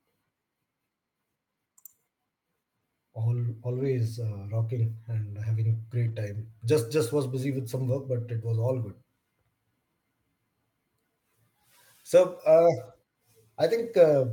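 Lost packets rebuilt from error correction at 3.71–3.85, 5.21–5.23 and 6.07–6.17 s: low-bitrate backup copies fill each gap, so the speech briefly turns rougher and noisier without dropping out.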